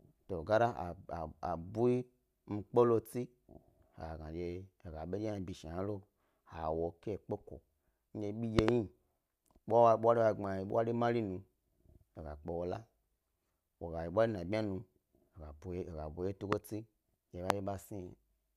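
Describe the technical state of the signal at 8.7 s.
A loud pop sits between 8.59 and 8.71 s, just after "kondye bi". It is two sharp pops in quick succession, peaking roughly 25 dB above the speech, with the speech continuing underneath. This is likely a sudden voltage step or pulse entering the signal chain, such as from a plug, a switch, static or a driver glitch. The downstream circuitry shapes that pulse into a brief thump.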